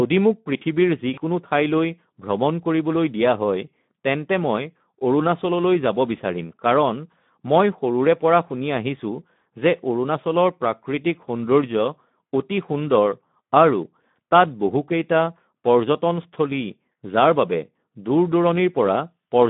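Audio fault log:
throughout: Speex codec. The speech has been squeezed through a CELP coder at around 11 kbps, with too few bits for the excitation, so voicing turns noisy and hoarse. The band is held to roughly 150 Hz to 3.6 kHz, giving a thin, telephone-like quality.
1.13 to 1.19 s: VoIP packet loss concealed by the speech codec. About 40 ms of audio went missing just before "ঠইলৈ ভ্ৰমণ কৰিবলৈ", and the decoder extended the previous pitch and filter with falling gain, so there is a brief fading smear, and the voice stays weak or distorted for a moment after speech returns.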